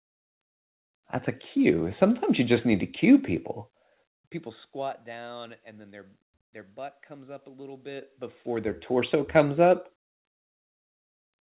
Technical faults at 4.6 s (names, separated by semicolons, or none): zipper noise